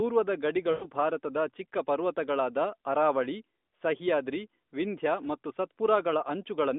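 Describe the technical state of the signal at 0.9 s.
Lost AMR speech frames run from 0.72 to 0.88 s, about 100 ms, consistent with five dropped 20 ms frames. The decoder stretched the last good pitch and vocal tract settings at falling gain, so the sound smears and fades, then returns through the narrowband line weak and rough at 0.9 s on "ಭಾರತದ ಚಿಕ್ಕ ಪರ್ವತಗಳಾದ ಅರಾವಳಿ".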